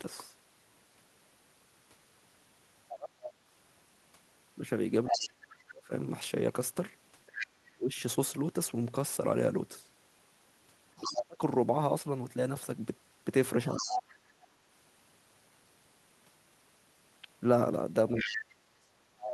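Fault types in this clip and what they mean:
Other side's voice leaking through: A second voice sits under the main speech from 2.88 to 7.47 s, from 10.97 to 14.46 s, and from 18.15 s to the end. It runs only about 5 dB below the talker. The likely cause is a loudspeaker on the talker's device. Its playback reaches the microphone, and the echo canceller fails to strip it out.
Speech suppressed in double talk: Between 2.93 and 14.32 s the main speech keeps sinking while the second voice is present. Those dips add up to about two seconds. At worst they fall by about 30 dB, which nearly mutes the talker. A shorter dip of about 25 dB comes at 18.14 to 18.65 s. Both sides are talking at once, and the echo canceller likely turns everything down because it cannot separate them.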